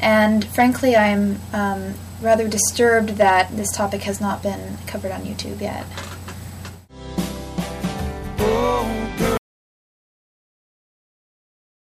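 At 9.38 s the sound cuts off abruptly in mid-flow, and the remaining 2.5 s to the end are an audio dropout to silence. The input was most likely lost through a disconnected device, a failed link or an accidental mute while the recorder kept writing silence. Unlike a fade-out or a noise gate closing, there is no gradual decay and no residual room tone or hiss, only silence.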